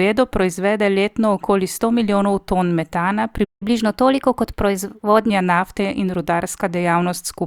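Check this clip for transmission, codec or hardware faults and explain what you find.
Two related faults appear: a playback stall followed by a catch-up at higher speed.

From 3.44 to 3.63 s, right after "sto milijonov ton metana", there is a playback stall. The player most likely ran short of data or had its output thread held up, so nothing reached the output for about 170 ms. The speech cuts out abruptly in mid-flow, leaving a hole of dead silence, and then carries on from where it stopped.

From 3.63 to 5.30 s, ending just before "nafte in", the player runs a catch-up at higher speed. To recover the time lost in the stall, it resamples its buffered backlog and plays it 1.1 times faster. Because resampling shifts speed and pitch together, the speech sounds hurried and sits about a semitone and a half higher for nearly two seconds before dropping back to its normal rate and pitch.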